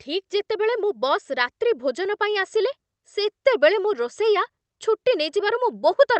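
Listening closely to this speech, nothing stood out as a technical problem at any point.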